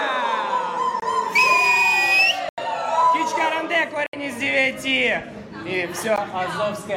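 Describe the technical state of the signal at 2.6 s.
At 2.6 s the signal has just come back from a block of digital silence spanning 2.49 to 2.58 s, an 87 ms run of silence, likely where the output buffer went unfilled. The hard cut and return leave a short hole. The waveform shows a dead-flat line, and the spectrogram shows an empty column.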